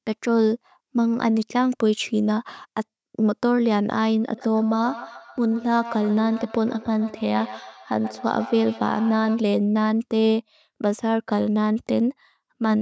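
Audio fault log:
4.34–9.48 s, feedback echo between two devices: the speech comes back again at a steady interval of roughly 150 ms, trailing each word with a hollow repeat that peaks about 15 dB below the direct speech. The cause is two devices on the same call in one room. One plays out what the other's microphone sent, and that microphone picks it up again. Each device's echo canceller removes only its own playback, so the returning copy circulates through the loop.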